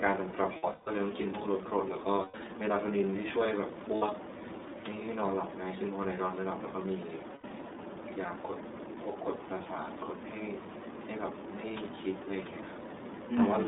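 From the start the whole clip runs through the iLBC codec. The band is squeezed to roughly 200 Hz to 3.7 kHz, so the speech sounds thin and telephone-like, and the coding damage is plainly audible as a rough, slightly synthetic edge. The 30 ms framing fits iLBC's 13.33 kbps mode. Each frame's excitation is coded independently, which costs a bit of naturalness but helps when packets go missing.

The first lost iLBC frames come at 0.57 to 0.88 s. About 240 ms of audio is missing, scattered over 300 ms, with the longest gap around a fifth of a second. The decoder fills it by repeating the last pitch cycle with noise mixed in, so you hear a held, buzzy, fading vowel. Shorter dropouts follow at 2.22 to 2.35 s (120 ms), 3.95 to 4.03 s (60 ms) and 7.34 to 7.45 s (90 ms). Because each frame decodes on its own, the speech snaps back almost immediately after every one.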